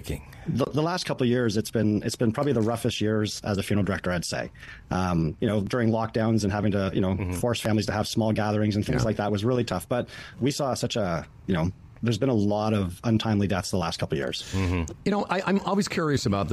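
The audio has three small skips, at 1.70 s, 5.67 s and 7.65 s. Each is a brief skip where roughly 11 ms of sound goes missing. The fault is overlap between stream segments. The stream arrives in 1.0 s segments. At these boundaries, two segments' time stamps overlap. The player discards the overlapping stretch as a duplicate, but that sound was never repeated. The waveform then jumps across the gap.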